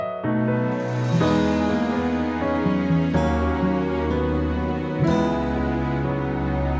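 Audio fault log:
No audible faults detected.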